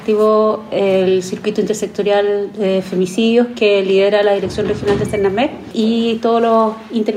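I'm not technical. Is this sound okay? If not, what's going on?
Yes, nothing wrong can be heard in this sound.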